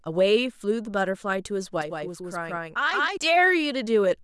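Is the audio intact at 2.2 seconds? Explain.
No. From 1.82 to 3.17 s, channel delay (doubling): one channel lags about 171 ms, fitting a 4096-sample buffer, so the mono sum carries an equal-level slap echo of the speech.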